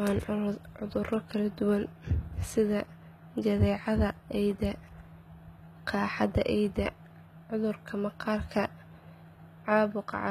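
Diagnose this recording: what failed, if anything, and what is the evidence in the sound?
The codec stage is at fault, and the damage runs through the whole speech clip. The treble sounds bright but is not real. S sounds are gritty and lispy, with a metallic sheen. Nothing is present above 14.9 kHz. This is likely HE-AAC compression, at a rate that fits roughly 20 kbps. Only the lower band is truly coded. The treble is rebuilt by copying lower bands upward under a coarse envelope. Harmonics then misalign at the crossover.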